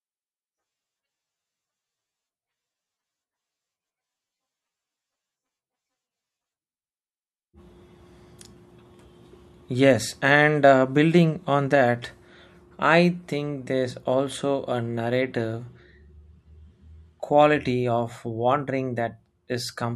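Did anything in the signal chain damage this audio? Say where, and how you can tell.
No, nothing in the signal chain damaged this speech recording. I can't point to any stage where the audio was harmed.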